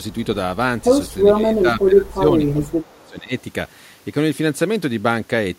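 From 1.36 to 3.33 s, an echo canceller that likely could not separate the near talker from far-end sound arriving at the same moment pulls the speech down as speech suppressed in double talk. About a second and a half of it dips, by about 15 dB at the deepest point. At 2.07 and 3.01 s, likely residual loudspeaker pickup slips past the canceller as echo leak. A faint copy of the speech returns 448 ms late, about 40 and then 35 dB below it.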